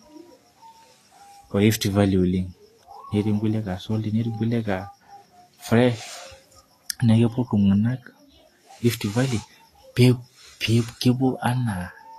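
Throughout the speech, the treble sounds hissy and grainy, likely from Vorbis compression at a low bitrate near 34 kbps; a spectrogram shows noisy upper bands ending sharply at 14.2 kHz.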